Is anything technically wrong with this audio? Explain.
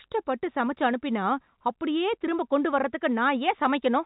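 No, nothing in this speech recording is technically wrong. It has the narrow sound of G.711 telephone coding, with nothing above 4 kHz and only a faint grain that rises and falls with the speech level.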